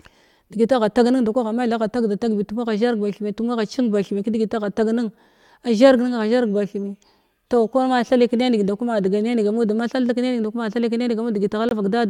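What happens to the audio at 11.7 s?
At 11.69 s the speech drops into a sudden, hard-edged silence that lasts about 40 ms, ending at 11.73 s. That's a corrupt frame muted: some compressed frames arrived with flipped bits, the decoder rejected them, and the player filled their slot with silence. The gap's length fits roughly three short codec frames in a row. Because the missing frames are replaced rather than skipped, the timing of everything around the hole stays put.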